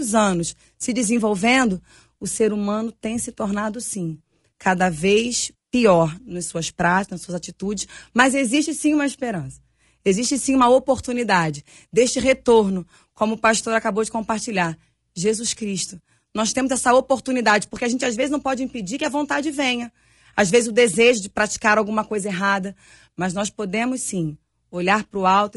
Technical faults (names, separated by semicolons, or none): low-delay AAC compression